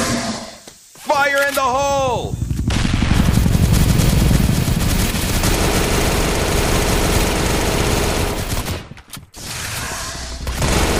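Nothing stood out as a technical fault on listening.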